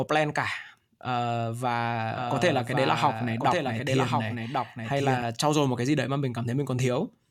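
Doubled audio track from 2.10 s to 5.22 s in this speech recording: a second full-band copy runs roughly a second behind the original and about 5 dB quieter, with no reverberant tail or room colouring. It cuts in and out abruptly, the copy entering just before "trau dồi một cái". The likely cause is the same signal being captured again through a slower path, or an edit leaving two misaligned copies stacked.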